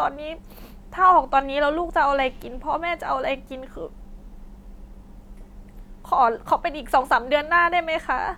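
No technical faults can be heard anywhere in the recording, and the signal stays continuous and steady throughout.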